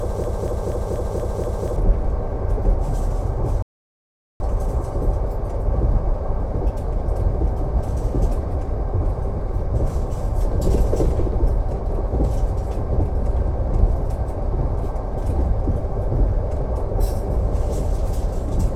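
From the very start until 1.76 s, a broken-record loop is already under way. A piece of sound about 0.24 s long repeats exactly, six times back to back, with a mechanical stutter. The stream likely stalled and kept resending its last fragment. The sound meant for that time is lost.

At 3.62 s, a rebuffering stall cuts the sound to silence. The gap lasts about 0.78 s, ending at 4.40 s. The player ran out of downloaded audio and waited for more. Playback then resumes exactly where it stopped. Nothing is lost, but time is added.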